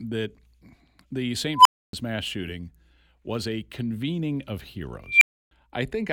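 Speech with an unstable filter at 1.55–1.93 s and 5.07–5.51 s: a tone near 1 kHz, then 2 kHz, swells within 106 and 144 ms, clips, then drops to silence for 280 and 300 ms. Unlike feedback howl, it blows up abruptly and cuts out.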